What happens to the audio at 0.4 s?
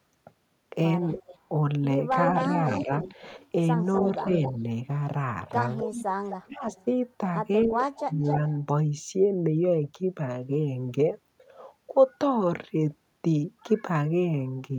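Nothing goes wrong at 0.4 s; the speech carries on cleanly there, with no dropout, click, distortion or other fault.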